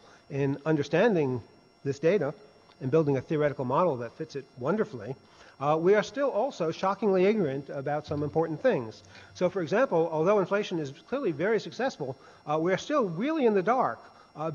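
Nothing in this audio catches the ear as a technical fault; there's no moment where something goes wrong.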